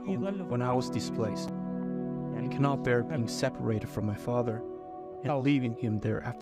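At 1.47 s there is a brief case of chunks out of order. One short slice of audio, about 5.8 ms long, plays two chunks later than it should. Nothing goes missing. The sequence is simply shuffled, which fits a small block arriving or being written late. The swap leaves three hard joins where the waveform jumps. It is heard as a tiny jumbled stutter.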